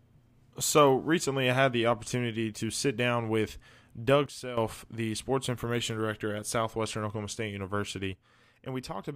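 At 4.26 s the speech and its background noise fall together by about 12 dB until 4.57 s, and from 8.13 s to the end they drop by about 8 dB. Each is a sudden gain jump, likely a gain setting applied without a ramp. The waveform envelope shows abrupt rectangular steps, and the spectrogram darkens evenly across all frequencies along sharp vertical edges.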